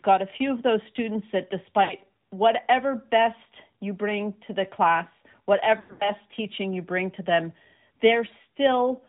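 The whole recording passes through the AMR narrowband mobile codec. Its 8 kHz sampling removes everything above 4 kHz, and its pulse-driven vocal-tract model gives the speech a plainly audible buzzy, synthetic edge, consistent with a mode around 10.2 kbps. On a spectrogram, energy stops at a hard ceiling at 4 kHz, and the harmonics below it look smeared and grainy.

At 1.84 s, between "of those students that" and "whatever best you bring", lost AMR speech frames cause a brief warble lasting until 1.93 s. The decoder fills the gap, which matches about three 20 ms frames, by repeating the last pitch and vocal-tract settings at falling gain. The waveform shows a short sag in amplitude, and the spectrogram shows flattened harmonics.

A longer patch runs from 5.80 to 6.12 s, after "bring to the class" and before "teaching you bring to". The losses are scattered over about 0.2 s, with the longest run near 100 ms. 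The sound stretches and fades toward silence, then returns weak and rough. A spectrogram shows frozen, fading bands followed by thin onsets.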